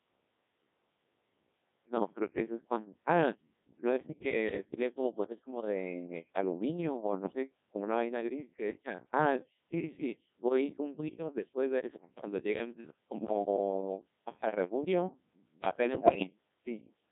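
From start to finish the speech passes through the Codec 2 vocoder, and the damage is heavy. The coarse, buzzy, robotic sound fits a rate near 1.6 kbit/s. Only pitch, voicing, energy and a spectral envelope survive, and the decoder rebuilds the voice from sine waves, so the original waveform is gone. On a spectrogram, harmonics look unnaturally regular and smeared, and all energy sits between 200 Hz and 3.6 kHz. The waveform looks synthetic, not like natural speech.

From 15.89 to 16.27 s, bit errors on digital voice radio corrupt the stream. At an error rate somewhere around 5 percent, flipped bits scramble the parameters of what sounds like several consecutive frames, so pitch, level and tone colour lurch from one frame to the next. The audio breaks into warbling, bleeping gibberish. A spectrogram shows harmonic stacks jumping abruptly in frequency with blocky, frame-sized steps in brightness, and the waveform shows sudden level jumps.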